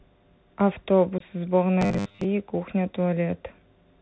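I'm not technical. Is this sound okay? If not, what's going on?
No. Throughout the whole recording, the speech carries the sound of the Bluetooth CVSD headset codec, the basic phone-call link many headsets use. It drops everything above 4 kHz, so the voice sounds muffled and boxy, s sounds come out scratchy, and a fine grainy hiss sits underneath. Unlike the brief faults below, this never lets up.

At about 1.18 to 1.22 s there is unconcealed Bluetooth headset packet loss. A few small chunks of audio, about 22.5 ms in all, never arrived from the headset, and nothing filled the gap. You hear a tiny hard-edged hole, possibly with a click, rather than a buzz.

From about 1.81 to 2.26 s the voice turns into a rigid metallic drone. This is robotic sound from repeated short buffers. New audio was arriving too slowly, so the system likely kept replaying the last tiny slice, roughly 10 ms, instead. 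That stamps a fixed 100 Hz buzz on the voice and skips most of the real speech. This differs from the packet loss because it fills the time with repeated sound instead of leaving a silent hole.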